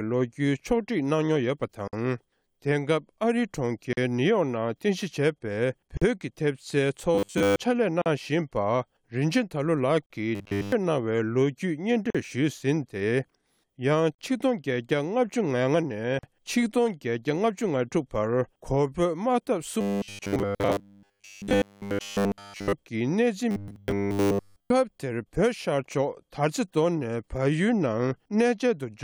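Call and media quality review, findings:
Gap at a join of encoded pieces: separately encoded segments joined untrimmed, encoder delay and padding left in. Silent dropouts about 43 ms (52 ms first) at 1.88, 3.93, 5.97, 8.02, 10.06, 12.10, 14.15, 16.19 s, every 2.0 s.

Robotic sound from repeated short buffers: likely starved playback looping a 10 ms buffer, skipping most to nearly all real audio. Rigid metallic 100 Hz buzz at 7.15–7.56, 10.35–10.72, 19.81–22.73, 23.51–24.70 s.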